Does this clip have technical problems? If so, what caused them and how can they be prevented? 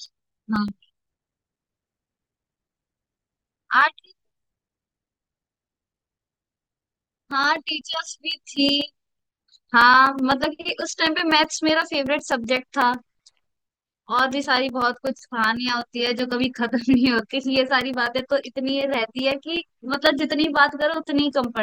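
Yes, periodic USB or driver dropouts tick through the speech from 0.06 to 21.57 s, every 0.125 s, each a few milliseconds of silence where something blocked the bus. Give the interface its own USB port and hunt down the polling background task.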